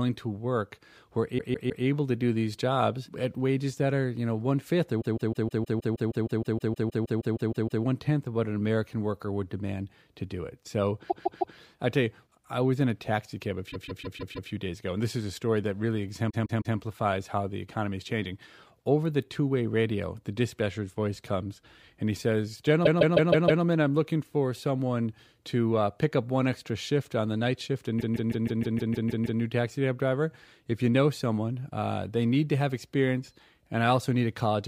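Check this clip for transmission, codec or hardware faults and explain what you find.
Repeated frames affect this speech clip at 1.37–1.84 s, 5.00–7.83 s, 11.09–11.56 s, 13.70–14.49 s, 16.29–16.76 s, 22.85–23.63 s and 27.99–29.40 s. A 157 ms block of compressed audio is decoded again three to eighteen times, producing a looping stutter. Each loop lengthens the audio, by 2.8 s at 5.00 s.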